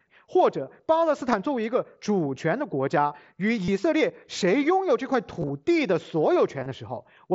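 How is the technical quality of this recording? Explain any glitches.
The speech comes through a wideband Bluetooth headset link, with mSBC coding audible as a top end stopping near 8 kHz and a light grain on loud syllables, and it has four brief dropouts. Concealed Bluetooth headset packet loss occurs at 1.32 s, 3.65 to 3.68 s, 5.40 to 5.50 s, and 6.60 to 6.66 s. Lost packets were patched by repeating the best-matching recent waveform. The single 1.32 s gap is nearly hidden, while the longer runs, up to about 30 ms, sound like a short buzzy hold with a slight warble on recovery.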